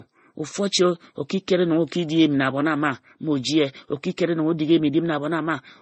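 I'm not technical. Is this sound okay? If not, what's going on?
No. The speech is dull from start to finish. Nothing above about 8.3 kHz comes through, so the crisp, airy top of the sound is missing. Consonants like s and t lose their edge. This is likely transcoding between lossy codecs. The audio was squeezed by one compressor, then squeezed again by another. Each pass added its own damage, and the two kinds now sound layered together.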